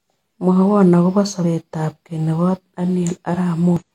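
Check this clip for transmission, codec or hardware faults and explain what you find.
One fault near the end of the speech. From 3.77 to 3.83 s, damaged data in a compressed stream: corrupted bytes throw the decoder out of sync while it hunts for the next valid frame, producing a brief 60 ms glitch.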